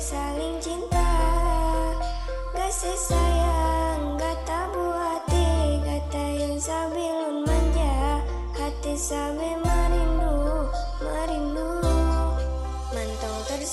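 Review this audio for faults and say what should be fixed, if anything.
Two sharp clicks sound at 5.18 s and 8.31 s. Each is likely dropped samples, a fraction of a millisecond lost. Stable buffering and clock sync prevent this.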